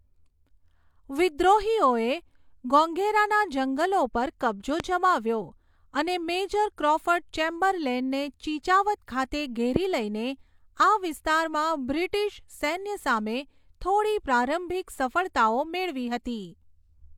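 Speech clip with two loud pops, sharp single bursts well above the speech at 4.80–4.82 s after "ગોગૈરાના જંગલો પર કબ્જો" and 9.76–9.78 s after "ક્રૉફર્ડ ચેમ્બરલેનને ચિચાવત ખાતે", likely voltage spikes from a switch, plug, static or driver glitch.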